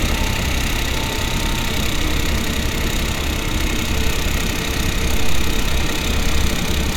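No technical faults are audible anywhere in the recording.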